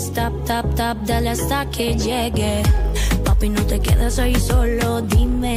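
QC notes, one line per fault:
Nothing here calls for a note, since no faults turn up anywhere in the clip.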